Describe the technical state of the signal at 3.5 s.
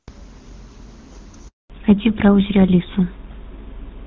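At 3.5 s the signal is in a fallback to narrowband, which runs from 1.70 s to the end of the clip. Before 1.70 s the speech has the clear wideband quality of HD Voice. From there on it has been handed to an older narrowband codec, consistent with GSM full rate, and nothing above 4 kHz survives. The voice sounds duller and rougher. A spectrogram shows a hard, flat ceiling at 4 kHz from 1.70 s onward.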